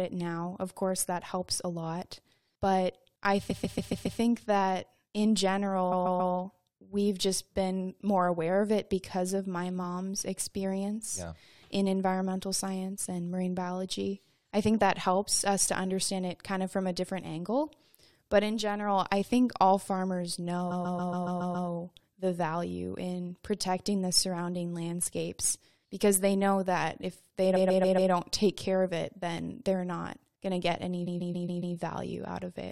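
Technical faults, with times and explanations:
3.50–4.19 s, 5.91–6.33 s, 20.70–21.68 s, 27.55–28.11 s and 31.06–31.75 s: repeated frames. Each time, the same 139.3 ms block of compressed audio is played again 5, 3, 7, 4 and 5 extra times. The speech stutters, and the clip runs longer by about 0.4 to 1.0 s at each spot.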